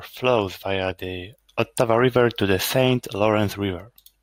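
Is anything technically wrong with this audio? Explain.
No, nothing technically wrong can be heard here.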